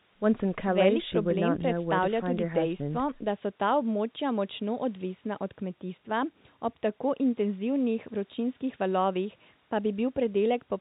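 No technical faults can be heard in this speech; it carries the narrow telephone band of G.711 coding, with nothing above 4 kHz and only faint quantisation noise riding beneath the signal.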